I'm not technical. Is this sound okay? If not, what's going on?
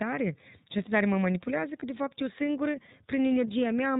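No. The whole recording has passed through the iLBC codec, a phone-call compressor that keeps only the lower part of the sound, up to 4 kHz. The speech stays clear but sounds slightly rough and synthetic, not merely muffled as a simple bandwidth limit would be.

There is also one lost iLBC frame, from about 1.80 to 1.83 s, right after "de tare mă manipulează" and before "de fapt eu singură". About 20 ms of sound went missing, and the decoder filled it by repeating the last bit of voice mixed with noise. Instead of silence or a click, you hear a brief buzzy hold, and then the voice recovers immediately.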